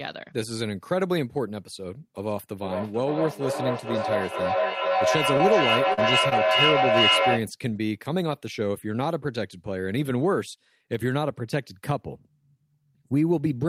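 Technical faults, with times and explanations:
2.59 to 7.54 s, feedback echo between two devices: two devices in the same room are on the call, and one is playing back what the other's microphone sent. That microphone picks it up again, and neither echo canceller touches sound the other device plays. Each bit of speech comes back roughly every half second, thinner and more ringing each pass. The loop is loud enough that the repeats build rather than fade, reaching about 4 dB above the speech itself.
5.37 to 5.41 s, 5.93 to 5.99 s and 6.29 to 6.33 s, short concealed packet loss: three small gaps of 20 ms, 40 ms and 20 ms of audio never reached the decoder in time. In each one the receiver patched the hole by carrying the last sound forward, following its pitch if it was voiced or filling with shaped noise if it wasn't, then blended back into the real signal. You hear a brief smear or wobble, sitting inside the echo stretch.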